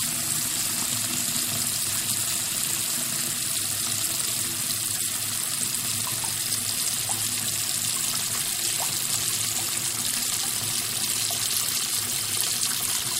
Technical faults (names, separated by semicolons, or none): none